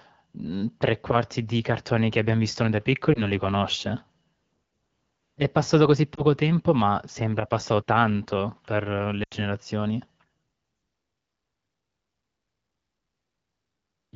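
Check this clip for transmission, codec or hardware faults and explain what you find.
Three short dropouts from lost AMR speech frames occur, at 3.13 to 3.28 s, 6.16 to 6.22 s and 9.23 to 9.34 s. Failed frames are replaced from the last good pitch and vocal tract settings at falling gain. The first two sound like single-frame dips or warbles. The third, longer and fading, suggests several consecutive frames lost. The clear wideband speech around them fits AMR-WB at 12.65 kbit/s or above.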